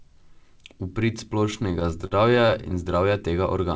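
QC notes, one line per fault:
1.46–2.83 s, repeated stalls (stutter): the speech catches and drags in a rapid, uneven stutter, with short held-over fragments breaking the flow. Across 21 brief gaps, the longest 42 ms, packets arrived late or too slowly, so the jitter buffer kept running dry. The receiver stretched the last sound to fill each wait, about 253 ms in all or roughly 18% of that stretch. Nothing is lost, but the timing is disrupted.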